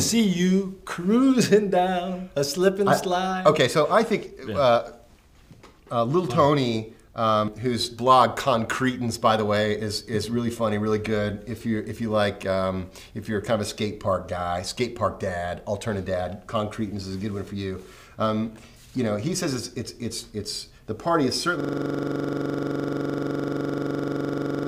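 At 21.6 s the system hangs while the audio hardware keeps replaying its ring buffer, a system hang loop that runs to the end. One 42.67 ms slice, which fits a 2048-sample buffer, repeats about 72 times, giving a rapid stutter at 23.4 Hz.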